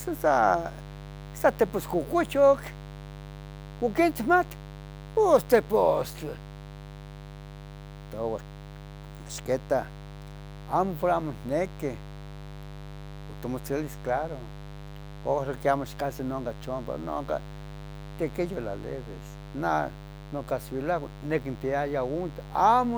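Interference from the 50 Hz mains supply, probably through a dimmer, rectifier or poorly shielded cable, injects sharp spikes twice per cycle across the whole clip. The result is mains buzz: a steady, raspy drone with harmonics reaching into the kilohertz range, sitting roughly 15 dB below the speech.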